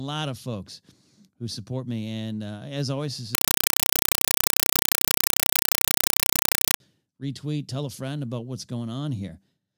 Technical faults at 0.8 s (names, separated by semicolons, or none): none